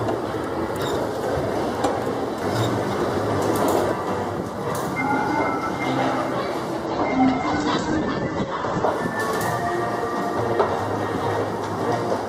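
At 6.86–8.86 s, an adaptive stream at a lower bitrate strips treble above 8.2 kHz and thickens codec artefacts. The switches are abrupt but gapless, unlike a dropout.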